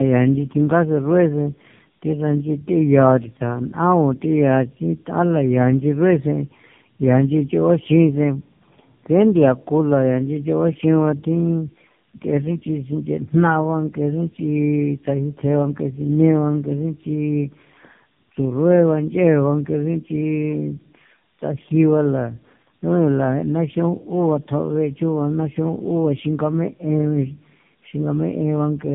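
Throughout, the speech shows tandem speech coding. It has passed through three speech codecs in a row, which fits a GSM full-rate leg followed by two AMR-NB legs, each recoding the previous output. It sounds rough, muffled and warbly. A spectrogram shows a hard ceiling at 3.6 kHz and smeared, blotchy harmonics.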